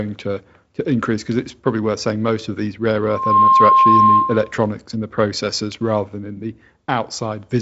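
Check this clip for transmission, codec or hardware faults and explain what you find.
One hardware fault stands out: loudspeaker feedback squeal from 3.01 to 4.54 s, starting just after "most of these rare" and ending before "and the processors rather". A microphone is picking up the loudspeaker it feeds, and at 1.1 kHz the loop gain tops one, so that tone builds on itself over a few tenths of a second until it sits roughly 10 dB above the speech. It is heard as a piercing whistle that swells and then holds. On a spectrogram it shows as a bright, steady horizontal line at 1.1 kHz that thickens as it grows. On the waveform the envelope swells and then stays inflated and dense.

The audio band stops near 7.7 kHz, with light wideband-coding hiss in the top band. This fits the G.722 telephone link, likely at 48 kbit/s.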